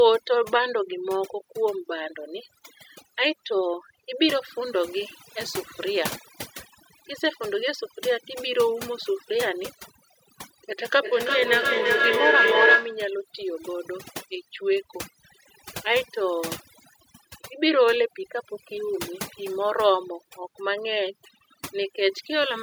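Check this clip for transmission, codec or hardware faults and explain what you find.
Two faults stand out in this speech clip: heavy-handed noise removal across the whole thing, and a burst of feedback howl in the middle.

The overdone noise removal runs from start to finish. The noise reducer was set so aggressively that it switches off individual frequency bands whenever they sit close to its noise estimate, and the softer parts of the voice get switched off along with the noise. That's why the background drops and breaks up into little twinkling specks.

The feedback howl kicks in at 10.79 s and runs to 13.1 s. Two devices in the same room are on the call, so sound goes from one microphone out of the other loudspeaker and back, getting louder on every trip instead of dying away. The loop settles on whatever frequencies it favours, here a tone around 1.5 kHz, and it pulses roughly every third of a second, which is the loop's round-trip delay. 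At its loudest it sits about 4 dB above the speech before the loop is broken.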